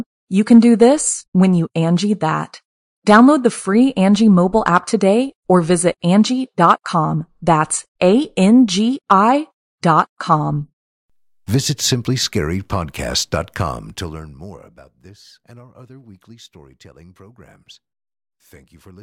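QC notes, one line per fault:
13.7–14.84 s, zipper noise: a fast ticking, buzzy rasp rides on the speech as the level falls by about 25 dB over roughly a second, ending just before "this and our other". The fade is applied as a staircase of abrupt gain jumps, around fifty a second, with no smoothing between them. Each jump leaves a small discontinuity in the waveform, and the string of tiny clicks merges into the zipping texture.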